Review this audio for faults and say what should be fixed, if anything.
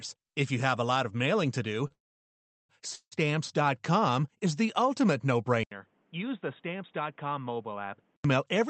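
At 1.87 to 1.92 s, just after "of mailing to do", there is a short stall from a late packet. A packet missed its playout deadline and the jitter buffer ran dry, so the receiver stretched the last bit of speech by about 30 ms until the packet arrived. Playback then resumed from the same point, so nothing is lost, but that sound is held slightly too long with a faint buzzy smear. A deeper jitter buffer, or one that adapts faster, would prevent it.

Two call audio freezes follow. The first runs from 1.92 to 2.71 s. The held sound fades quickly and leaves about 0.73 s of silence before speech picks up where it left off, with nothing missing. The second runs from 2.95 to 3.14 s, again after "of mailing to do". It is a shorter hold of about 0.16 s that ends in about 80 ms of silence. The likely cause is packets held up on the network long enough to empty the jitter buffer, which pushes a gap into the speech and adds delay. 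Improving network stability, for example by prioritising voice traffic, would prevent them.

From 5.63 to 8.24 s, right after "is the ultimate no", the input switched to a poorer device. There is a brief silence of about 80 ms, and then the speech becomes dull and boxy with nothing above 3.8 kHz. It also drops roughly 10 dB in level and carries a new noise floor about 35 dB below the speech. The likely cause is the capture moving to another microphone or a headset call profile. This is a narrower band than the Opus call path carries, since that path passes content up to 8 kHz. Locking the input device for the duration of the recording would prevent this.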